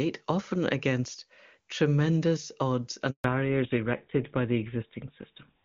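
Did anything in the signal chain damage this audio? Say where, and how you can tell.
Yes. A handover gap hits the network stage at 3.10 s. The speech dies away within a few tens of milliseconds and stays silent for 140 ms, until 3.24 s. This is what a call sounds like when it is moved from one network to another and no speech frames arrive during the switch. With no frames, the decoder has nothing to play and can only fade to silence, so whatever was said in that window is gone.

A fallback to narrowband follows in the codec stage from 3.24 s to the end. Straight after the gap, everything above 4 kHz disappears and the speech turns duller and rougher. Before 3.10 s the audio is full wideband, consistent with AMR-WB HD Voice at a high rate such as 23.85 kbit/s, with little or no codec damage. The hard 4 kHz ceiling afterwards points to the new link running an older narrowband codec such as GSM full rate.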